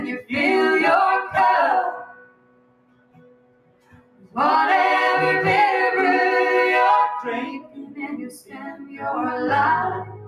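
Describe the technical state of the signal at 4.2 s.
At 4.2 s the signal sits inside a stretch where the sound cut by the noise suppressor is present. That stretch runs from 2.04 to 4.36 s, with about two seconds of it affected in total. The suppressor has judged this sound to be noise and turned it down harder than the rest, by up to about 17 dB at its deepest. Sustained and decaying parts sink or are cut short. Sharp onsets still come through.

Underneath, a noise suppressor applied to music or sounds is active for the whole clip. It was built for speech, so it treats steady tones, ambience and reverb tails as noise to be removed. Its gain swings by roughly 20 dB. Attacks survive while held parts and tails are pulled down.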